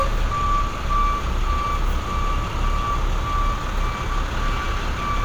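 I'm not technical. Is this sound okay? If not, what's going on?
Yes, this sound is okay; nothing wrong here.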